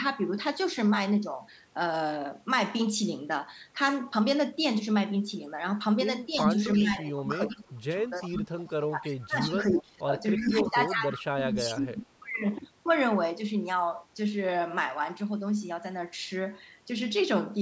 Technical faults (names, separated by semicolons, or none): speech suppressed in double talk; echo leak